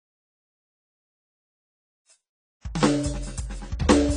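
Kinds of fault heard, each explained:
AAC compression: the music was likely passed through a low-bitrate AAC-LC encoder, consistent with about 24 kbps, which discarded everything above 10.1 kHz and coarsely quantised the rest, so the track sounds plainly dull and smeared, with a warbling, fizzy texture on sustained sounds.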